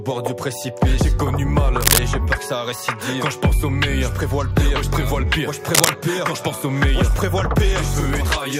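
Two short bursts of cable scratch noise break into the sound, one from 1.81 to 1.99 s and another from 5.74 to 5.90 s. Each lasts under a fifth of a second and comes through as a dense, uneven scratching or rustling that sits around 5 dB louder than the sound itself. The likely cause is a worn cable, connector or control getting moved, so its contact resistance jumps around and throws ragged noise into the signal.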